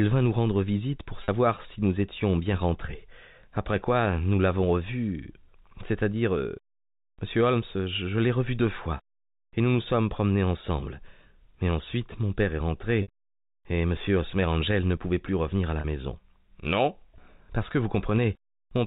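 A French speech clip heard through telephone-band G.711 A-law coding, with three brief packet loss with pitch repetition events: 1.24–1.28 s between "nous rendre visite pour" and "si nous étions bien", 13.02–13.08 s after "ensuite mon père est", and 15.80–15.84 s after "plus revenir à la". Each gap of 40, 60 and 40 ms, consistent with two or three lost 20 ms packets, is bridged by repeating the last pitch cycle, which sounds like a short held buzz, the 60 ms one fading into silence before speech returns. On a spectrogram this shows as frozen, evenly spaced harmonics. In the waveform it appears as identical repeated periods.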